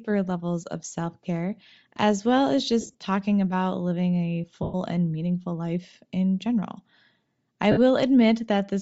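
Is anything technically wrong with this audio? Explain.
Yes, there are two problems. Throughout the speech there is a breathy, grainy edge, with the upper spectrum sounding hollow and hissy rather than detailed. The likely cause is Bluetooth LC3 compression. The codec works in short 7.5 ms transform frames, and at a low rate that fits about 32 kbps it discards much of the high-frequency content and fills the gaps with shaped noise. That damage is plainly audible.

There are also three brief lost LE Audio frames events, heard as noisy smears where the speech turns rough and unfocused for a moment. The first runs from 2.81 to 2.93 s, just after "care as well as". It is broken up, with the missing audio scattered over about 135 ms and the longest stretch around 30 ms. The second, from 4.63 to 4.75 s, falls between "living a" and "and meaningful life in" and covers about 112 ms. The third, at 7.71 to 7.78 s, is shorter, about 52 ms. 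In each case the decoder covers missing frames by repeating the last spectrum with randomised signs, which is why the sound smears into noise instead of cutting out cleanly.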